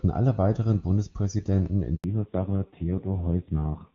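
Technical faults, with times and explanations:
1.96–2.04 s, handover gap: the speech cuts off abruptly and stays silent for 80 ms while the call switches networks. No speech frames arrive during the switch, so the sound within that span is simply missing rather than concealed.
2.04 s to end, fallback to narrowband: after the gap, everything above 4 kHz is gone. The speech turns muffled and rough, losing the clear HD Voice band heard earlier. This points to the call dropping to narrowband AMR at a low rate of around 5.9 kbit/s.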